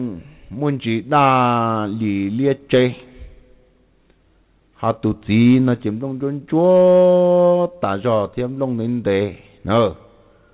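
No technical faults occur at any point in the clip, which comes over a telephone-grade call path with nothing above 4 kHz.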